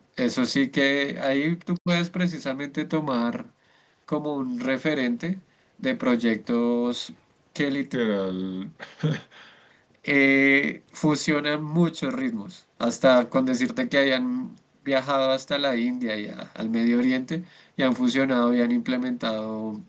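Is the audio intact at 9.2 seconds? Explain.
No. A section at the wrong speed, from 7.94 to 9.71 s, plays at 0.889x, likely from a clock mismatch, so speech sounds about two semitones lower and slower.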